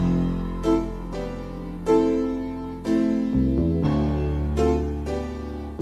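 No technical faults can be heard anywhere in this audio. Nothing in the signal calls for a fix.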